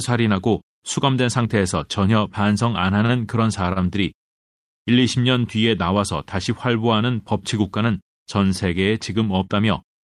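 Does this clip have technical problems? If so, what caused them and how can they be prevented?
Yes. The speech shows two short stalls from a late packet, at 3.05–3.11 s and 3.73–3.82 s. Each time a packet had not arrived when due, the jitter buffer ran dry, and the receiver held the last sound for about 34 ms and then 31 ms, giving a brief drawn-out buzz or dip. Playback then resumed where it stopped with nothing lost, but the delay grew by those amounts. A larger or adaptive jitter buffer and steadier network delivery would prevent this.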